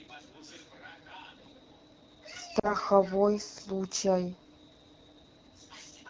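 Throughout the clip the speech passes through the AMR wideband (HD Voice) codec at a low rate. The encoder models the voice as pulses driving a vocal tract filter up to 6.4 kHz and substitutes shaped noise above that. At this setting the model cannot keep up, so the speech sounds plainly rough and raspy, which fits one of the codec's two lowest modes, around 8.85 kbit/s.

From 2.59 to 2.75 s there are lost AMR speech frames. Corrupted frames failed their checks, and the decoder covered roughly 40 ms of missing audio by reusing the previous pitch and vocal tract settings while lowering the gain. The result is a short, smeared warble that sags in level, after which the voice returns briefly weakened and rough before settling.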